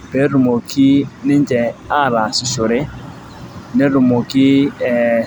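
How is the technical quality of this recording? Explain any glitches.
Nothing stood out as a technical problem when listening to this recording.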